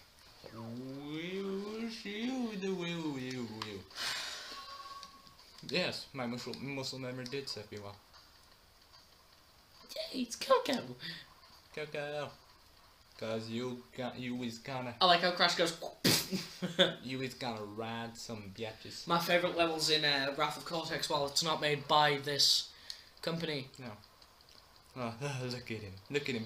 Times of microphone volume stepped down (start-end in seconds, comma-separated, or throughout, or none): none